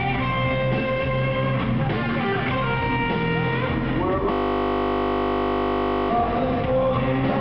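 At 4.32 s the sound locks into a system hang loop that lasts until 6.1 s. The host or driver stalled, but the audio hardware kept replaying the same stretch of its ring buffer. That stretch is only 20 ms long. It repeats about 89 times at 50 Hz. Because the loop is so short, it does not stutter. It becomes a steady, flat buzz at 50 Hz. Normal sound resumes at 6.1 s.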